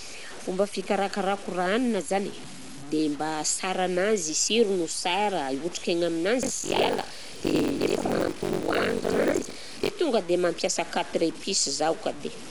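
From start to finish, the speech carries a grainy, gritty distortion that moves with the sound. Quiet syllables turn rough and the faintest parts break up or sputter. This is likely low bit depth without dither: samples cut to very few steps, with the error sitting about 20 dB below the signal.

Also throughout, the sound is dull. A rough, fluttering noise clings to the tones. This points to Dolby Digital compression at a low bitrate, which fits 64 kbps. The encoder narrowed the band and left many frequency lines without bits, which the decoder filled with noise.

From 6.42 to 9.91 s, a steady robotic buzz at 46.9 Hz rides on the speech. It stops just before "tonga dia mampiasa quatre". This is buffer tearing. Writer and hardware have slipped, so roughly half of each buffer replays audio about a tenth of a second old. That fits a 1024-sample buffer.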